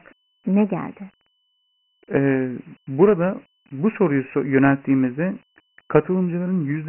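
From start to finish the speech sounds thin and boxed-in, with a gritty hiss riding on every syllable and nothing audible above about 3.1 kHz. This is Dialogic VOX ADPCM, the OKI-style 4-bit coding used for phone menus and voicemail. Heavy quantisation noise tracks the speech level. The low ceiling fits a 6,000-sample-per-second rate, consistent with a 24 kbps stream. The low end also stops near 150 Hz, a telephone-line band.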